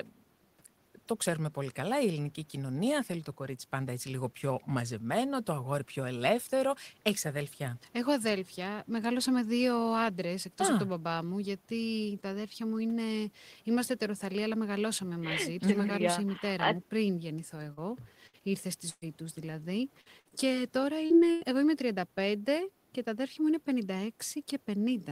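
At 17.73 and again at 21.06 s there's short concealed packet loss: about 40 ms never arrived in time, and the decoder bridged it by carrying the last sound forward, leaving a quick smear. Bursts of packet loss at 18.27, 18.89 and 21.32 s drop roughly 60, 120 and 100 ms. The patch fades out as a held buzz or hiss, and the middle one goes briefly silent. From 20.01 to 20.52 s, repeated packet loss (robotic sound) punches four gaps, the longest about 55 ms, so the audio turns choppy.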